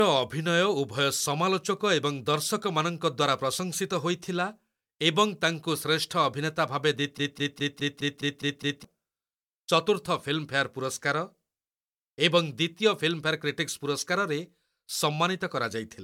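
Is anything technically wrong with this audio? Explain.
Yes, there are two faults in this speech clip.

Throughout the clip there is generation loss. The sound is swirly and hollow, consonant attacks are smeared, and nothing is present above 19.9 kHz, which fits an MP3 at about 128 kbit/s. The cause is likely repeated decoding and re-encoding, around five passes. Each pass requantises on a shifted frame grid, so noise and spectral gaps accumulate.

From 7.18 to 8.85 s there is a broken-record loop. A 0.21 s fragment repeats back to back eight times with no variation, and the audio that should have played there is gone. The likely cause is a stalled player, encoder or stream that kept resending its last buffered chunk.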